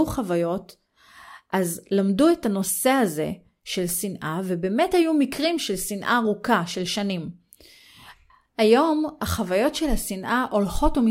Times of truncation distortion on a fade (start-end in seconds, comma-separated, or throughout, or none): none